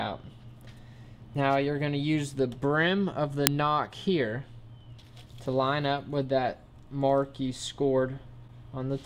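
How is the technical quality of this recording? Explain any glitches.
There is one glitch, an uninitialised buffer at 3.47 s. For about 1.33 ms, which fits a 64-sample buffer, leftover memory was played as audio before real samples were written, producing a crack. The waveform shows a short block of values unrelated to its neighbours, and the spectrogram shows a thin broadband vertical line.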